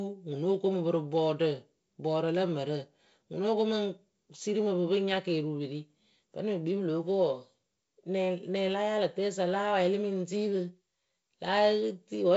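No technical faults are audible in this speech.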